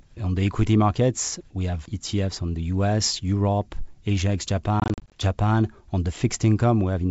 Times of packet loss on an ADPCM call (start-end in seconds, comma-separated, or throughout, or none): 4.80-5.19